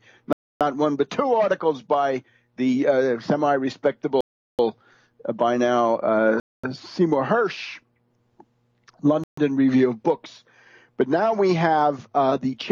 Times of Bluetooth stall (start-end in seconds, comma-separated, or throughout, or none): 0.33-0.61, 4.21-4.59, 6.40-6.64, 9.24-9.38